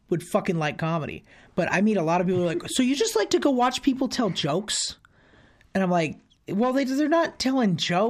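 From 0.15 s to 8.07 s the speech carries clock slip clicks: faint, evenly spaced ticks roughly ten times a second, about a hundred in all, clearest on louder sustained sounds and gone in the pauses. The likely cause is two devices running on unsynchronised clocks, with one sample dropped or repeated each time the drift totals a full sample. The spacing fits a clock mismatch of around 200 ppm.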